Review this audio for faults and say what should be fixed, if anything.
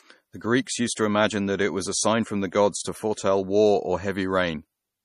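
Throughout the speech there is plainly audible MP3 compression, likely from low-bitrate encoding: nothing sounds above 14.5 kHz, and weak high frequency detail flickers in and out, giving a watery, swirling edge to s sounds, which fits about 40 kbps. A simple low-pass filter would dull the treble cleanly, without that swirl. To prevent it, keep the original file or re-encode at a much higher bitrate.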